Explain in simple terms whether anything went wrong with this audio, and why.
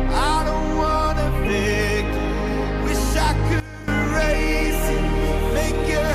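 At 3.6 seconds the sound abruptly gets much quieter, then jumps back up at 3.88 seconds. This is a sudden gain jump, likely caused by a volume setting applied instantly rather than smoothly. Unlike a fade, the change is immediate, and the background drops together with everything else.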